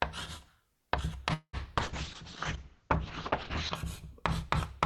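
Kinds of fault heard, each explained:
Call audio freeze: From 1.33 to 1.56 s the sound stalls. The last moment is stretched into a fading buzz or hiss, with about 70 ms of silence at the end. Then the audio resumes where it stopped. This is likely a delay in packet delivery that left the jitter buffer empty.
Call bitrate drop: From 1.81 to 3.81 s the sound turns coarse and watery. The top end falls from 20 kHz to 8 kHz for nearly two seconds. This fits the encoder dropping from about 64 kbps to 7 kbps after the bandwidth estimate fell.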